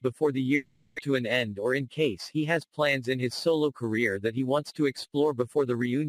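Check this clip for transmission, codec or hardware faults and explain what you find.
Three faults are audible, all in the first two and a half seconds and all tied to packet delivery and the receiver's jitter buffer.

Long network dropout, 0.55 to 1.00 s. Here the sound stops progressing and is replaced by a stretched continuation of what came just before, a buzzy tone that fades across roughly 430 ms without ever reaching silence. About 400 ms of the original audio never returns, and playback resumes further on. The likely cause is a burst of packets failing to arrive, with the receiver's concealment generating a substitute signal until fresh data arrived.

Jitter buffer slow-down, 1.07 to 1.51 s. Immediately after the gap, the receiver's playout buffer was nearly empty, so it stretched the audio to rebuild its reserve. It did this by repeating individual pitch periods and small pieces of pauses over and over, adding 41 ms in total. 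The result plays at about 92% speed with unchanged pitch. Sounds come out drawn-out, as if the flow were dragging.

Jitter buffer speed-up, 1.58 to 2.15 s. The buffer was holding more than its target delay, so the receiver cut out short pieces one or a few pitch periods long, removing about 50 ms. Playback runs at about 108% with pitch unchanged, which makes this stretch sound rushed compared with what surrounds it.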